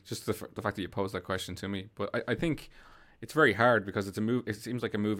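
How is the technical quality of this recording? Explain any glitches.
No technical glitches are audible.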